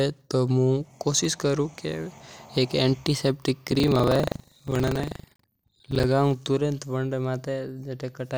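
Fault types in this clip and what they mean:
Buffer tearing: reader and writer cross inside each 40 ms buffer, splicing in speech about a tenth of a second old, so a 25 Hz rattle, with hard waveform joins and regular vertical spectrogram stripes.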